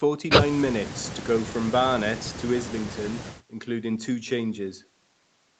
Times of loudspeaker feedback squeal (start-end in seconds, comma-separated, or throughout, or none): none